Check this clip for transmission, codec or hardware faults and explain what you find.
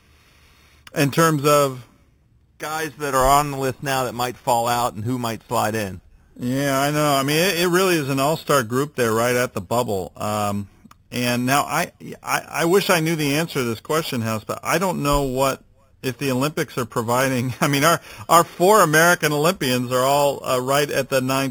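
One fault runs through the entire clip: imaging from sample-and-hold upsampling. The speech was converted from 8 kHz to 48 kHz by repeating each sample with no smoothing filter. That left mirrored copies of the spectrum, the first between 4 and 8 kHz at about 13 dB below the signal. It adds a bright metallic fizz that swells with the speech, its lowest band moving against the pitch.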